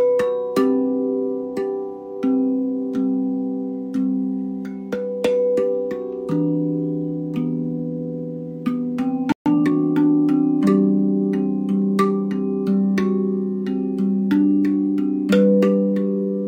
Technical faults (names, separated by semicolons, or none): playback stall; time-compressed catch-up